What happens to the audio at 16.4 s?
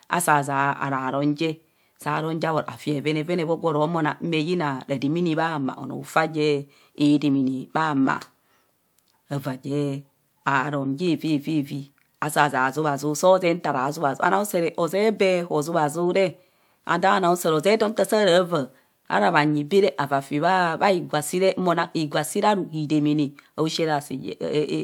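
Nothing goes wrong at 16.4 s; the speech plays through that moment intact, with no dropout, glitch or other disturbance.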